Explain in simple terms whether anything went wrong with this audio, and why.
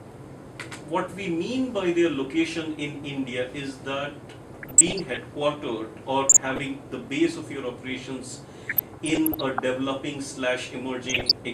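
There's DAB burbling in four short bursts: 4.47 to 5.19 s, 6.29 to 6.66 s, 8.62 to 9.63 s, and 11.09 to 11.33 s. Weak reception let errors slip into the digital audio, so bits of the sound jump around, giving short blips of noise.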